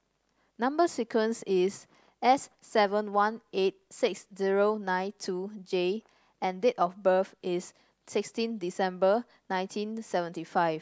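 Nothing stood out as a technical problem when listening to this speech recording.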